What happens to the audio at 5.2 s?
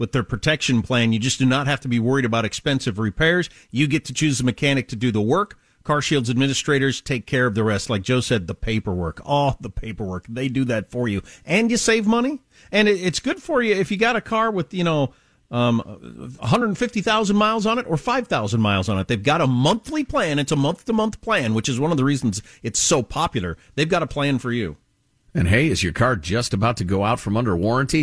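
Nothing goes wrong at 5.2 s; the speech continues intact through that moment.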